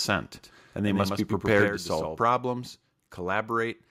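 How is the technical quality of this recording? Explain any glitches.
The recording has three clear faults, all in the first 2.2 s of the speech.

From 0.35 to 2.19 s there is a doubled audio track: a full-band copy trails about 100 ms behind, about 5 dB quieter, likely from a second, slower capture path. It sounds like a dry slapback echo that starts and stops abruptly.

From 1.48 to 1.63 s there is microphone overload. Peaks exceed the converter limit by about 3 dB, flattening a small fraction of samples and adding a harsh, crackly edge.

At 1.68 s the microphone volume is stepped down: voice and background drop about 5 dB at once, likely because the call software reacted to the clipping just before.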